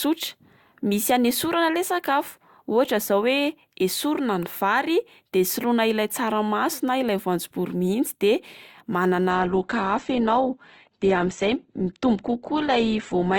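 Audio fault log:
9.30 to 13.38 s, adaptive stream at a lower bitrate: the speech abruptly goes dull through to the end, with nothing above 8 kHz, because the stream fell back to a much leaner encode, which fits a drop from roughly 64 to 12 kbit/s Opus.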